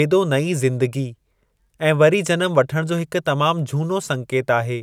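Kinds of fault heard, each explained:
Crude rate conversion: unfiltered linear interpolation, fitting a 44.1 kHz to 48 kHz change, leaves faint inharmonic fizz, 0.49–3.01 s, seen as stray spectrogram partials.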